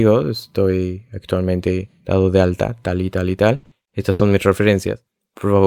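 A speech clip in which packets are being lost or arriving too late, repeatedly, from 3.55 to 4.21 s, just after "tal y tal y". This is repeated packet loss (robotic sound): five gaps, the longest about 80 ms, are each bridged by stretching the last received sound forward, about 260 ms of fill in all, covering roughly two-fifths of that stretch. The result is choppy speech with pieces dropped out.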